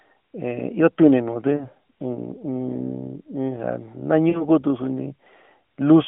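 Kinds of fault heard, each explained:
Lost AMR speech frames: at 1.56 to 1.68 s and 4.30 to 4.45 s, corrupted frames made the decoder repeat its last good pitch and vocal tract settings at falling gain. Each gap sounds like a brief smeared warble with a weak return, fitting two lost 20 ms frames.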